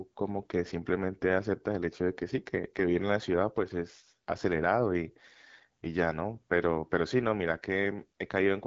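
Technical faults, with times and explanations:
Throughout: AMR wideband (HD Voice) codec. The speech is rough and raspy, and nothing is present above 7.6 kHz. The codec models the voice up to 6.4 kHz with a vocal tract filter driven by pulse sequences. At this level of damage the pulses are coded too coarsely, which fits the 8.85 kbit/s mode, one of its lowest rates. Shaped noise stands in for the band above 6.4 kHz.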